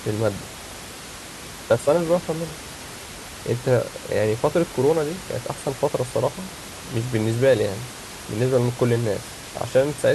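No technical faults can be heard in this speech recording; the only background sound is the room's own noise, sitting about 15 dB below the speech.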